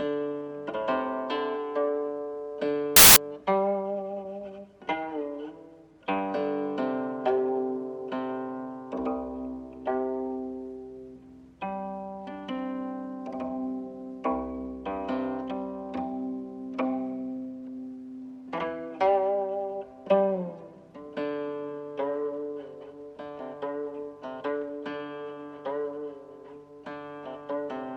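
From 2.96 to 3.16 s, samples built from the wrong bytes turn the audio into a burst of loud, harsh broadband noise: the reader misassembles each sample, so the rapidly changing low bits dominate. Unlike clipping, nothing of the original shape survives for those 0.2 s.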